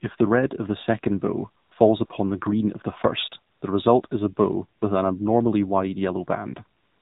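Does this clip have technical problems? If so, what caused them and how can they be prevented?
Yes. The whole clip passes through the AMR narrowband mobile codec. Nothing above 4 kHz survives, and the speech sounds buzzy and synthetic, which fits a low mode near 7.4 kbps. Few bits leave few pulses per frame. Use a higher mode or a wideband codec.

AMR comfort noise replaces the real background at 1.64–1.72 s, 2.06–2.10 s, 3.52–3.62 s, 4.80 s and 6.78–7.02 s. The phone judged these moments silent. The receiver then filled them with smooth synthetic noise that switches in and out. Disable discontinuous transmission to prevent it.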